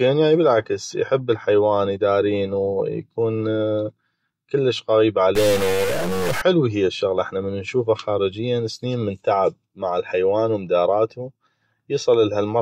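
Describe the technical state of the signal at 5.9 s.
At 5.9 s the signal sits inside a stuck bit fault running from 5.35 to 6.42 s: harsh, buzzy distortion, with low-level gaps filled by noise. The likely cause is one data bit held fixed, offsetting affected samples by a step of about -20 dBFS.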